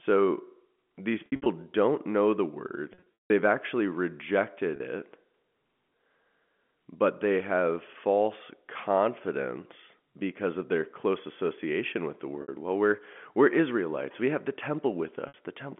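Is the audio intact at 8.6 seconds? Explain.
Yes, the audio is intact at 8.6 seconds, with the speech coming through the G.711 telephone coding and its narrow line band as expected and no fault at that moment.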